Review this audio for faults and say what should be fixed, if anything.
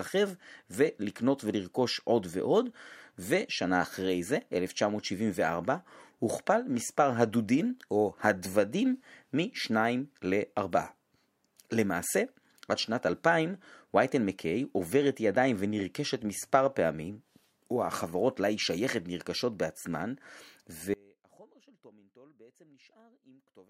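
At 20.94 s the speech abruptly drops away and stays gone to the end of the clip, leaving only a faint trace of the signal about 30 dB below its normal level. This is an audio dropout to a faint residue, with no pause or fade leading into it. The likely cause is a break in the wanted signal path while the chain after the break stayed live, passing through only a weak leak. Securing connections and monitoring the input level during recording would prevent it.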